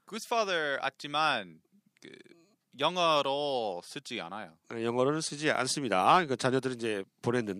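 No technical faults are audible.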